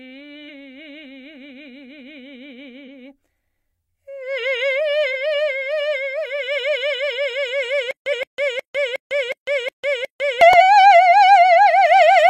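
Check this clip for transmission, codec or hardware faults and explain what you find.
Yes, there's trouble here: this music clip has two kinds of fault, and they overlap in one place.

Damaged data in a compressed stream shows up five times, at 0.45–0.50 s, 2.84–2.88 s, 5.10–5.14 s, 8.09–8.13 s and 10.56–10.61 s. Each is a quick glitch of roughly 40–50 ms. Some compressed frames got corrupted, so the decoder misread them, lost its place and jumped to the next valid frame header, dropping some of the music.

Then from 7.91 to 10.41 s there's a stutter with silent gaps. A 212 ms chunk of music plays, then about 152 ms of dead digital silence, and it repeats seven times on a steady 364 ms cycle. The music that should have filled those 2.5 seconds is gone. The likely cause is a playback or stream stall, with each retry replaying the last buffered fragment before running dry. The 8.09 s corruption blip lands inside this stutter.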